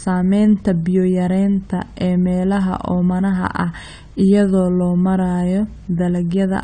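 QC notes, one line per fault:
Throughout, AAC compression: the speech is band-limited with nothing above 9 kHz, and it sounds dull and smeared, with plainly audible warbling on sibilants and held sounds. The likely cause is low-bitrate AAC-LC, which fits roughly 32 kbps, cutting the top band and coarsely quantising the rest.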